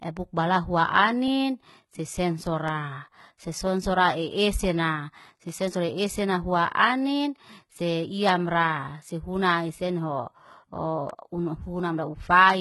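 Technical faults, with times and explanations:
Throughout, HE-AAC compression: the treble is heavily damaged, likely from spectral band replication rebuilding it from copied lower bands, so s sounds turn gritty and metallic. A spectrogram shows repeated, smeared high-band patterns that stop sharply at 11.8 kHz, which fits a low bitrate around 16 kbps.
0.58 to 12.5 s, clock drift buffer slips: a regular click recurs every 0.7 s, about twenty in all, likely from two mismatched clocks drifting roughly 500 ppm apart, so a block of around 15 samples is dropped or repeated. A spectrogram shows evenly spaced thin vertical lines, and the waveform shows small discontinuities at each slip.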